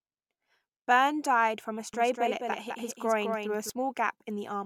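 From 1.94 s to 3.70 s there is a doubled audio track, most likely because the speech was picked up a second time through a slower path and both copies were mixed together. The result is a second, full-band copy trailing around a fifth of a second behind, roughly 5 dB quieter, with no reverb tail or room colouring. It switches on and off abruptly at those edges, giving a dry, stuttering echo.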